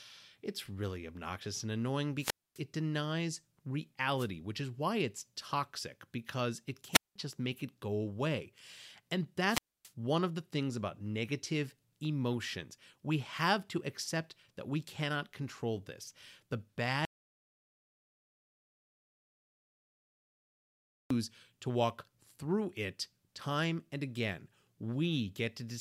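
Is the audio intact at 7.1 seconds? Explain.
No. From 6.92 to 7.16 s, after "it's toxic because it", a wireless microphone squelch dropout occurs: the fading radio signal brings a rise of static, then the receiver mutes for about 0.19 s before "just make it go". Unlike a digital dropout, the silence is preceded by hiss.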